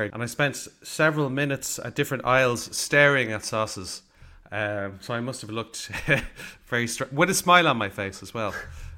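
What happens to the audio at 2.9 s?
Nothing goes wrong at 2.9 s; the speech carries straight through that moment without any dropout, click, distortion or other audible fault.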